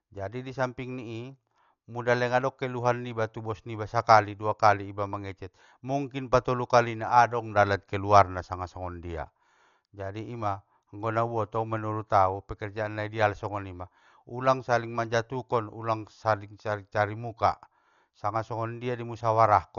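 Throughout, the speech stops at 6.9 kHz, with rough, fluttering fill noise rather than clean dullness: likely heavy Dolby Digital compression, fitting about 48 kbps.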